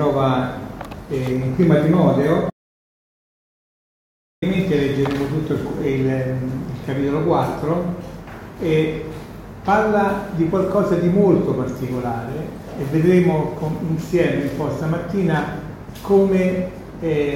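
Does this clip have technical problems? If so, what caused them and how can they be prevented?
Yes, there's an audio dropout to silence from 2.50 s to 4.42 s. The sound cuts off mid-flow and comes back just as abruptly, and for those 1.9 seconds there's nothing at all, not even room tone, so whatever happened in that gap is simply lost. That kind of dead silence most likely means the input went away, say a loose connection or a brief mute, while the recorder kept writing. Secure cables and wireless links and keep an eye on input meters during takes.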